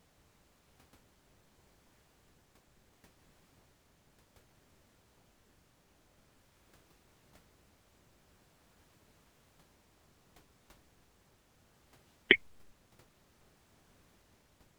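Nothing stood out on listening to this speech, apart from the quiet room noise sitting about 23 dB beneath it, which belongs to the recording itself.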